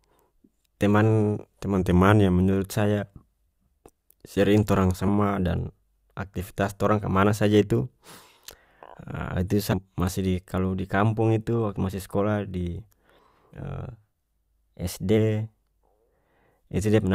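A speech recording in which the voice twice lurches out of tune. From 1.76 to 2.41 s it drags about 5.5% slow and sinks by roughly 98 cents, almost a full semitone, then snaps back to normal pitch. From 13.83 to 15.17 s it does the opposite, rushing about 5.5% fast and rising by about 93 cents. These steps are likely a drift correction step, where clock-matching software abruptly changed the playback rate to refill or drain its buffer, moving speed and pitch together. Separately, brief disruptions break into the sound at 5.07 s and 9.72 s, each lasting about 16 ms, with a longer one of about 36 ms from 13.50 to 13.53 s. These are the signature of damaged data in a compressed stream: corrupted bytes leave the decoder unable to read those frames, so the sound is disrupted while it loses sync and searches ahead for the next valid frame header.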